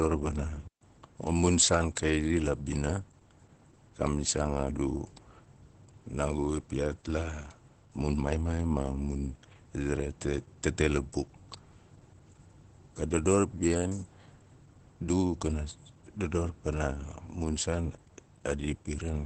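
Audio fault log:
throughout: Opus voice compression. The speech is coded by the SILK linear-prediction coder in wideband mode. Nothing remains above 8.4 kHz, so the top of the speech band is gone and the sound is muffled. The excitation is coded coarsely, so the damage is plainly audible as a hoarse, slightly robotic edge. The artefacts fit a bitrate around 12 kbps with 20 ms frames. SILK models the voice as a source plus a filter, and at such a low rate too little detail survives to rebuild it cleanly.
0.67–0.81 s: digital wireless dropout. The speech cuts to near silence for about 141 ms, then returns. The wireless link lost too much data, so the receiver muted its output rather than play corrupted audio. It fades out and back in very quickly. That is why the gap sounds like a clean hole. No burst of noise or crackle comes before or after it, which marks this as a deliberate mute and not an analogue signal fade.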